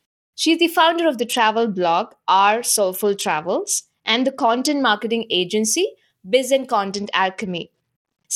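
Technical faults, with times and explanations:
1.20–4.84 s (after "the founder of", until "marketing agency") and 6.87–8.36 s, Bluetooth SBC bit pool drop: the link cut its bit budget, consistent with a bit pool falling from 28 to 10, about 84 kbps. The top sub-bands were starved, so the sound turns dull and gritty until the rate recovers.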